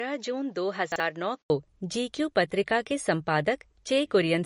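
Across the whole clip the speech has that watery, swirly quality of heavy MP3 compression, and nothing survives above 10.6 kHz. The treble has been cut off at a fixed point, and faint detail flickers in and out from frame to frame. The damage is plainly audible and fits a low bitrate of around 40 kbps. The likely cause is that the encoder ran short of bits and started dropping whatever its hearing model judged least important.

The opening 1.5 s sound duller and boxier, with the band stopping at 7.5 kHz, a little quieter (a few dB down), and with a faint noise floor of its own, well below the speech. Then there's an 80 ms gap and the fuller sound returns just before "को जी क्यू पत्रिका". That pattern points to the input having likely switched to a poorer device, such as a different microphone or a headset's call profile, and then back again.

Inside that dull stretch, from 0.92 to 1.0 s, there's a brief jumbled moment. 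It comes from chunks out of order: a 40 ms piece of audio landed one chunk late and played after the piece meant to follow it. Nothing went missing, but the swap leaves three hard joins, and those produce the garbled blip.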